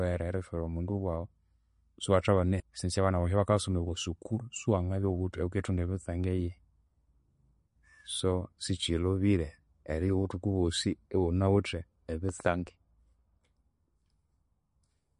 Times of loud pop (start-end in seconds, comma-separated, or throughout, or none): 12.29-12.42